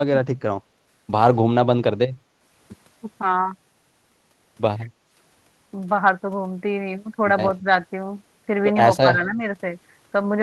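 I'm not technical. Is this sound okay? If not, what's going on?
No. On a call where both sides speak at once, the echo canceller likely can't tell this talker apart from the loudspeaker echo. It turns the speech down, so there is speech suppressed in double talk at 0 to 0.13 s (nearly cutting out), briefly at 7.61 to 7.67 s, and for about a third of a second at 9.01 to 9.43 s.

There is also background gated by the echo canceller. At 0.71 to 0.82 s the canceller clamps the microphone while the loudspeaker plays, so the room sound dips for a moment and then returns.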